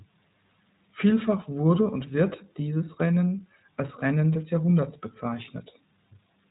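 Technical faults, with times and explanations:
throughout: Low bit depth without dither. A grainy, signal-following distortion sits around 40 dB below the speech, roughening quiet passages and decays rather than forming a steady hiss. This likely comes from truncation to about 9 bits with no dither, so the rounding error tracks the waveform.
throughout: iLBC codec. Nothing passes above 3.8 kHz, giving a muffled narrowband sound, and the speech has a plainly audible rough, synthetic edge. Each 20 ms frame's excitation is coded independently at a rate that fits iLBC's 15.2 kbps mode, discarding fine waveform detail.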